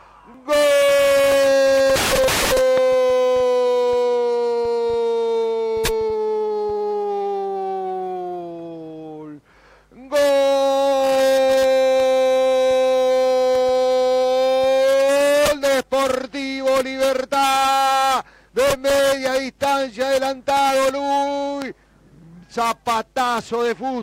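At 2.78 to 2.80 s and again at 21.62 to 21.64 s there is a loud pop, each a single sharp click peaking about 10 dB above the surrounding sound, which carries on underneath. The likely cause is a brief voltage step or pulse, from a plug, switch, static or driver glitch, entering the signal. On a waveform each shows as a narrow spike standing well above the envelope; a spectrogram shows a thin vertical stripe across the full frequency range.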